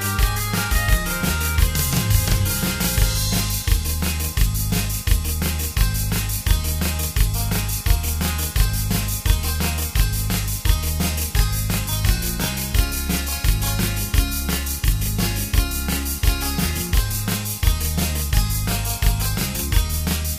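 All the way through, there's a channel delay doubling: one side arrives 40 ms late and the two get folded to mono, so every sound has an equally loud second copy trailing right behind it, a thickened doubling edging toward a short slap echo.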